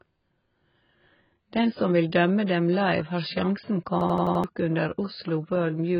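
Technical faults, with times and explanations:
Throughout: AAC compression, likely at a very low bitrate, leaves nothing above 5.1 kHz; the speech sounds dull and smeared, and the spectrogram shows a flat ceiling with patchy gaps.
4.01 to 4.44 s: system hang loop, one 85.33 ms slice of audio repeated five times at 11.7 Hz, a machine-gun stutter; the waveform shows identical blocks, fitting a 4,096-sample ring buffer.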